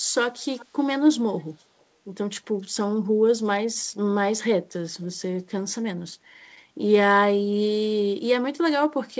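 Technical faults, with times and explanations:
0.57–0.66 s and 1.38–1.84 s, echo leak: a faint delayed copy of the speech, lagging about 0.38 s, first as a short scrap roughly 25 dB down, then a longer, barely audible stretch. It's likely a loudspeaker-side echo canceller letting some pickup through.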